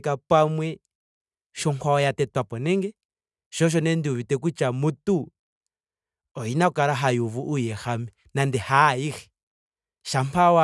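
Speech, with nothing technically wrong with it.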